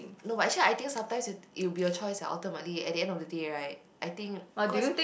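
Nothing stood out on listening to this speech recording.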